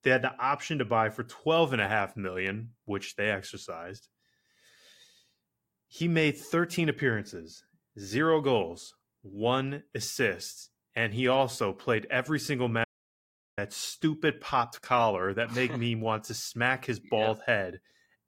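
Speech, where the input signal was likely lost, as through a disconnected device or failed link, while recording kept writing silence. The result is an audio dropout to silence from 12.84 to 13.58 s, a 0.73 s gap with no room tone, between "also played every single" and "stupid popped collar that".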